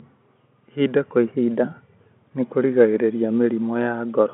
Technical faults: none

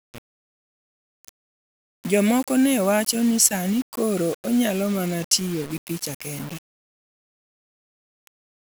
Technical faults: low bit depth without dither

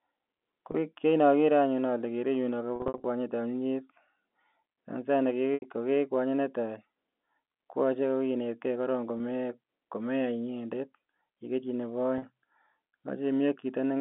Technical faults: packet loss with pitch repetition

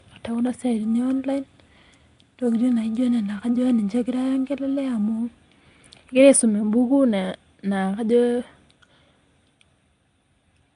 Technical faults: Nellymoser compression; periodic clock jitter

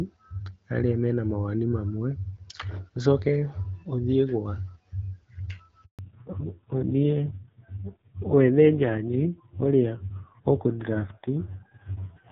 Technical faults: handover gap; fallback to narrowband

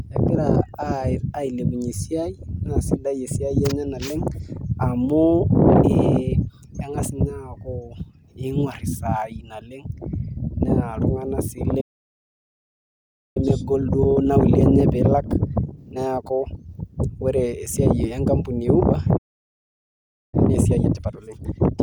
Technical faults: playback stall; time-compressed catch-up

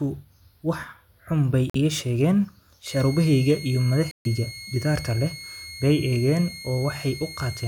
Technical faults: Bluetooth dropout; switching supply whistle

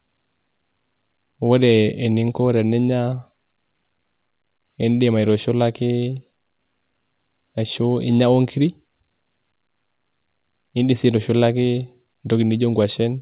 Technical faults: none

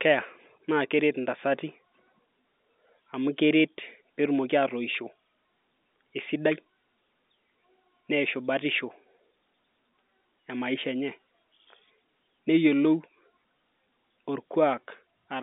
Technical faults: none

